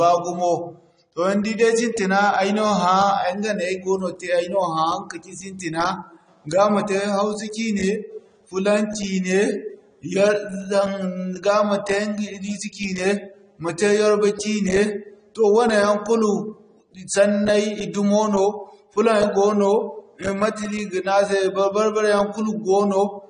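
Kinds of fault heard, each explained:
AAC compression: The speech was likely squeezed through a lossy AAC-LC encoder starved of data, which fits a bitrate around 32 kbps. To save bits, the encoder discards the top of the spectrum and quantises what remains coarsely against a hearing model. Here nothing survives above 9.8 kHz, so the speech sounds dull and closed-in for the whole clip, and the coarse quantisation leaves plainly audible codec damage throughout.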